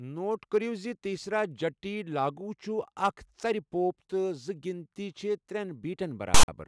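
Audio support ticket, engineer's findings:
File tags played as audio, 6.34–6.48 s, near end of clip. Hard-edged burst: loud rasp from text bytes read as samples, offset to one side, plus dead silence from zero padding. Waveform: lopsided block and flat line. Spectrogram: broadband vertical smear. Component: container parser/decoder.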